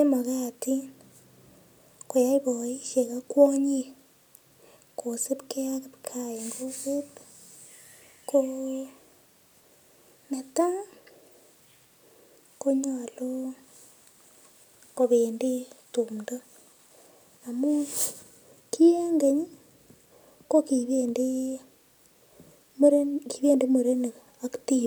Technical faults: none

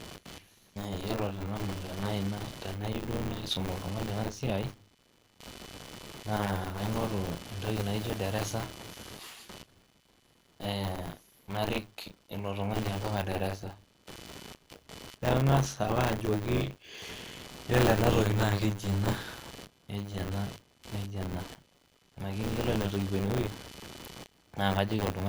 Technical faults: computer activity noise; transcoding between lossy codecs; buffer tearing

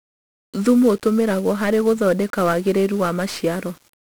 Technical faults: 1-bit DFPWM compression

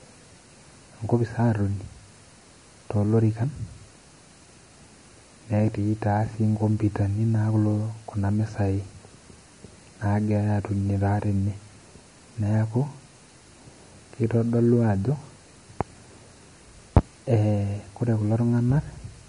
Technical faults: MP3 compression

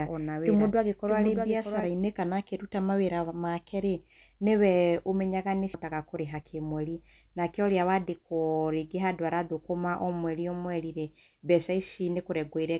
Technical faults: doubled audio track; skip ahead; jitter buffer speed-up

